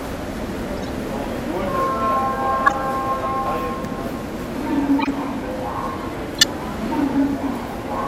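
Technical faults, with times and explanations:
0.77–0.90, 2.66–2.74, 4.99–5.08 and 6.38–6.44 s, corrupt frame decoded: four short glitches, each spanning a few damaged frames the decoder played anyway, so misread gains and codes scatter energy into wrong frequencies. The ones near 2.7 and 6.4 s are loudest, around -5 dBFS.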